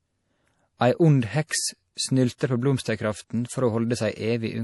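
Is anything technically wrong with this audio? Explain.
Yes, there's a clear coding problem running through the whole clip. The speech has nothing above 11.5 kHz, so the top end sounds dull and shut off, and there's an obvious watery, swirly quality on top of it, with s sounds turning chirpy and metallic. That's likely MP3 compression at a low bitrate, something like 48 kbps. Short of bits, the encoder chops the treble and lets weak frequency components flicker in and out between frames.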